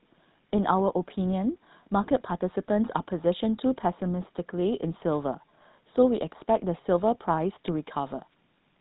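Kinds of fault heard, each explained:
GSM full-rate codec: The speech runs the whole way through the original GSM full-rate coder, which models the vocal tract and drives it with a sparse, regularly spaced pulse excitation. The result here is plainly audible: a buzzy, gravelly roughness on the voice and nothing above 4 kHz, at the 13 kbps of GSM full rate. Simple band-limiting would dull the top end without this grain, and MP3-style damage would swirl and warble rather than buzz.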